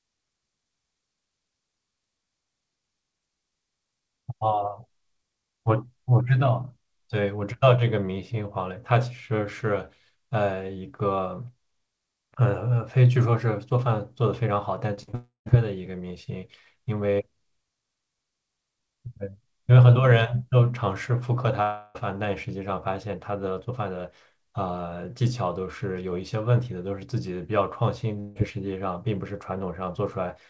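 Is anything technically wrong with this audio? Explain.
Yes. The speech has two kinds of network fault.

From 14.94 to 15.51 s there is repeated packet loss, giving a robotic sound. Four short gaps, the longest 41 ms, are each patched by stretching the previous sound. About 100 ms goes missing, so the stretch sounds choppy.

There are long network dropouts at 15.15 to 15.48 s, 21.63 to 21.97 s and 28.20 to 28.37 s. Each is likely a stretch where no audio arrived. The last sound is drawn out as a fading buzz. The first dropout also falls to about 130 ms of silence. The speech resumes with 160 to 320 ms lost.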